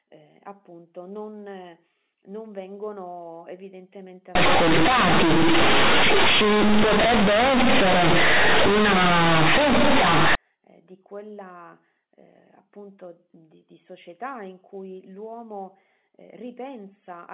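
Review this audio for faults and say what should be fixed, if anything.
From 4.35 to 10.35 s, just after "non non vengono evidentemente" and up to "eh di quella eh", the speech becomes very loud, buzzy distortion with strong noise in the pauses. This is companded audio read as linear. Mu-law bytes are played as plain 8-bit samples with no expansion, so each sign change swings the output across about half its range and quiet sounds come out as large as loud ones. Unlike clipping, which only flattens the loudest peaks, this noise stays loud even in the gaps. Around the fault, the G.711 mu-law telephone coding at 8 kHz keeps the sound below 4 kHz. To prevent it, label the stream's encoding and always pass mu-law data through its expansion table before playback.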